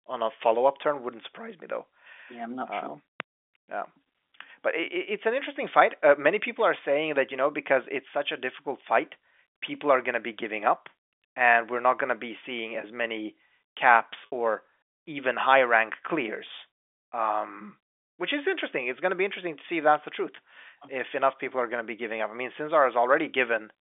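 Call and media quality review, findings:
Packet loss with pitch repetition at 14.26 to 14.32 s, between "seeing as many caps" and "or even high rank". The sound briefly holds on a buzzy, repeated pitch period for 60 ms, which fits three lost 20 ms packets. Probable component: receiver-side loss concealment in the jitter buffer or decoder. A hard dropout would leave silence or a click. Here the gap is bridged by a sustained, slightly buzzy tone. Narrow G.711 line band, 250 Hz to 3.5 kHz, present throughout.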